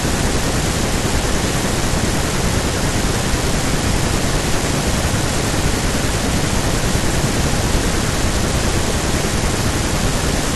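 Listening through the speech recording, nothing stood out as a technical problem at any point.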